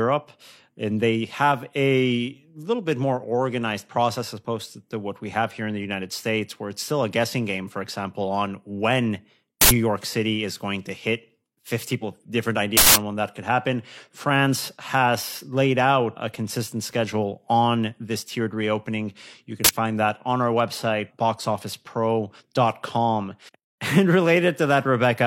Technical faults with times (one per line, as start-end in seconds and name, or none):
9.61-9.71 uninitialised buffer
11.98-12.03 stream segment skipped
12.77-12.96 uninitialised buffer
19.64-19.69 uninitialised buffer